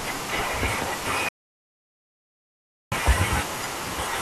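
An audio dropout to silence runs from 1.29 s to 2.92 s in this speech recording, about 1.6 s of silence with no room tone. The speech cuts off abruptly and resumes just as abruptly, which points to the input likely having been lost while the recorder kept writing silence, so whatever was said in that span is gone.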